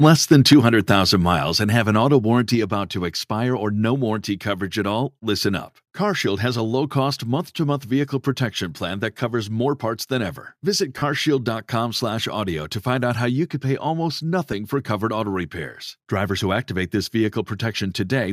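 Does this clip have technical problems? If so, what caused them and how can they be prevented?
Yes. From 0.03 to 0.53 s the loudest syllables have a harsh, crackling edge. This is likely microphone overload: peaks ran about 4 dB past the converter's limit, flattening the tops of a small share of the waveform. Lowering the microphone's input gain before recording prevents this.

Right after that the level drops suddenly three times: about 3 dB at 0.53 s, about 2 dB at 1.53 s just before "and have an auto", and about 4 dB at 2.55 s, between "and have an auto" and "about to expire or". Voice and background fall together in single steps, most likely the microphone volume stepped down by call software reacting to the overload. Fixing the input level beforehand and turning off automatic gain adjustment avoids these jumps.

At 10.99 to 11.02 s a 30 ms patch turns into a noisy smear, and at 14.52 s, between "you could pay almost" and "for covered auto repairs", a 10 ms blip does the same. 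These are lost LE Audio frames. The gaps fit three and one 10 ms frames, and the LC3 decoder filled them by repeating the last spectrum with scrambled phase, which sounds like noise. The light graininess, likely from LC3 compression, elsewhere sounds normal for this link. Keeping the Bluetooth device close, with a clear path and less 2.4 GHz interference, reduces frame loss.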